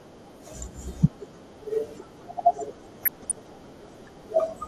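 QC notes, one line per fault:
throughout: MP2 compression. The speech sounds dull and granular, with a gurgling edge as upper sub-bands switch on and off and the remaining bands are coarsely quantised. This is likely low-rate MPEG Layer II coding, around 80 kbps. Unlike MP3 swirl, the damage comes as whole bands flickering.
3.01–3.32 s: DAB burbling. For about a third of a second, watery blips sit over the speech as corrupted samples put short bursts of noise into single sub-bands and corrupted scale factors make sub-bands jump in level for up to a frame. The signal keeps running, so this is not a dropout. It fits bit errors slipping past error correction, at a rate well under one percent.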